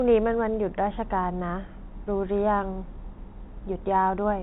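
Speech carried over a telephone-style G.711 A-law path, band-limited with nothing above 3.9 kHz, and no technical fault is audible anywhere in the recording.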